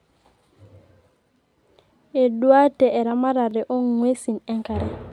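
At 1.49 to 1.51 s and again at 3.51 to 3.54 s, the speech stutters briefly. These are overlapping chunks: the audio was handled in 2.0 s blocks, each starting before the previous ended, so about 23 ms of audio plays twice at each join, giving a short click-like repeat.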